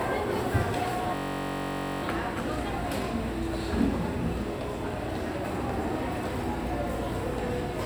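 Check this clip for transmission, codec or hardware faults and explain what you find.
One fault stands out in these everyday sounds. A system hang loop runs from 1.15 to 2.03 s, as the hardware keeps replaying one 21.33 ms ring-buffer slice, which fits a 1024-sample buffer. It repeats about 41 times, producing a steady buzz at 46.9 Hz.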